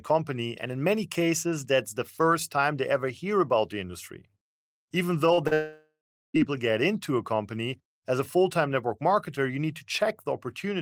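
At 5.33 and 5.47 s there are two short concealed packet losses, each about 40 ms of audio that arrived too late to decode. The receiver bridged each gap by extending the preceding sound, then crossfaded back, leaving a brief smeared wobble in the speech.

From 5.53 to 6.36 s the speech gives way to a fading synthetic continuation of the last sound, then about 0.41 s of near silence, before resuming at "get into a company" with roughly 0.82 s lost. This is likely a long network dropout.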